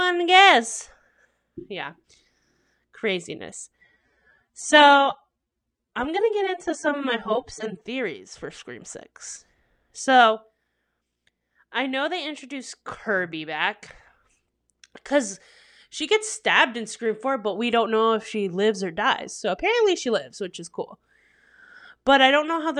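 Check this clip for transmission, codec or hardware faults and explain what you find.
One fault appears: an adaptive stream at a lower bitrate, from 3.81 to 7.81 s. For those four seconds the speech abruptly takes on a swirly codec texture, then snaps back without any gap. That fits the player dropping from roughly 96 to 24 kbit/s AAC while the connection slowed.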